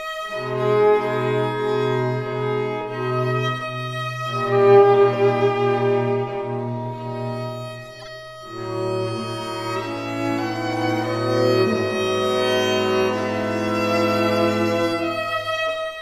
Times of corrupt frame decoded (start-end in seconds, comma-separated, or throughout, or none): 7.99-8.07